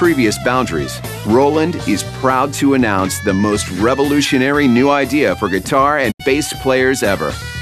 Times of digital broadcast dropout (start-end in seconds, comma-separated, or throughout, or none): 6.10-6.21